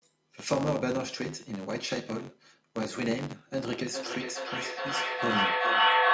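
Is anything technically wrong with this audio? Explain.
Yes. Two faults can be heard.

Throughout the clip there is a steady buzz at about 93.8 Hz. It rises and falls with the speech level, so it sounds like fine ticking that gets louder with louder passages. This is a filter restarted on every block: the filter drops its memory at each block boundary and starts again from silence, leaving a small transient every time. A rate of 93.8 Hz fits a 512-sample buffer at 48 kHz.

From 3.73 s to the end there is a feedback echo between two devices. Each phrase comes back around every 0.4 s, thinner and more ringing with each pass. The returns reach about 7 dB above the speech itself, so they stack up instead of dying away. Two devices on the same call share a room, and one replays what the other's microphone sent. That microphone captures it again, and neither echo canceller removes audio the other device played.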